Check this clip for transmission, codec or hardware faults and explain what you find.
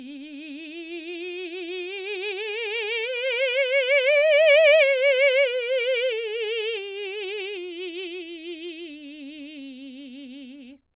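No transmission, codec or hardware faults turn up in this music clip, which carries the band-limited sound of a telephone-grade call path, with nothing above 4 kHz and the coarse coding noise of mu-law G.711, consistent with a 64 kbps stream.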